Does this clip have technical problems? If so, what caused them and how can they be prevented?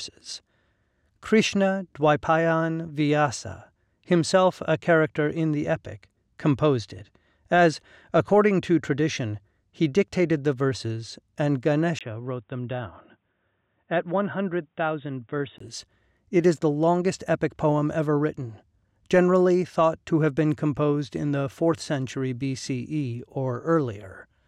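Yes. After "dictated the verses and", from 11.99 to 15.60 s, a 20 ms gap is followed by dull, boxy sound with nothing above 3.8 kHz, slightly lower level and a faint new noise floor. The likely cause is the input switched to a poorer device. Lock the recording input and disable automatic device switching.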